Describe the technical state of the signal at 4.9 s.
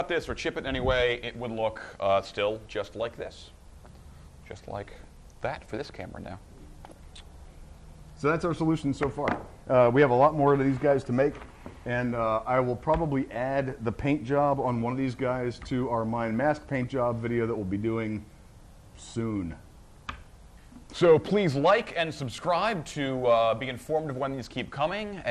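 At 4.9 s the sound breaks into DAB burbling, from 4.88 to 4.96 s. Bit errors have slipped past error correction into the MP2 data. Wrong samples put short blips of noise into single sub-bands. The result is a brief burst of burbling. Its length fits a few corrupted frames, at an error rate well under one percent.

Underneath sits steady MP2 compression, likely at a low bitrate near 80 kbps. Upper sub-bands are starved of bits and switch off. The remaining bands are coarsely quantised. The sound is plainly dull, with a gurgling, granular edge.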